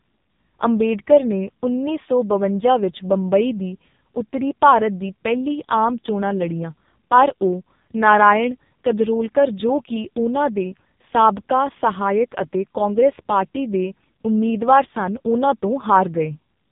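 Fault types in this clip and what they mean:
AMR narrowband mobile codec: The whole clip has been through the old 2G/3G phone speech codec, and hard. Everything above about 3.8 kHz is gone, so the speech sounds boxed-in and telephone-thin. The codec rebuilds the voice from a vocal-tract model fed by a handful of pulses every few milliseconds, and here the damage is heavy. It's buzzy and synthetic-sounding, which fits one of the lowest AMR modes, around 5 kbps.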